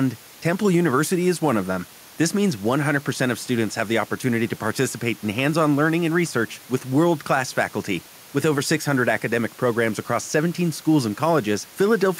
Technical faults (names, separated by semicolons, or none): none